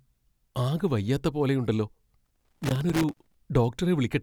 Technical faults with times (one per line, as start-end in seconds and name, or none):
2.25-3.35 loose connector crackle